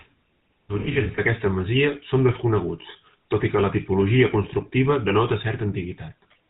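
From start to finish the speech has passed through the GSM full-rate codec, a vocal-tract model excited by sparse regular pulses at a rate that fits 13 kbps. Nothing survives above 4 kHz, and the voice carries a plainly audible buzzy, gravelly roughness.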